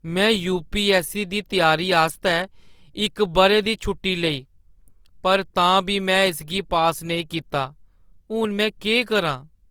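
Throughout, the speech sounds grainy and rough, likely from Opus compression near 24 kbps, which fills bit-starved bands with noise while keeping full bandwidth to 20.2 kHz.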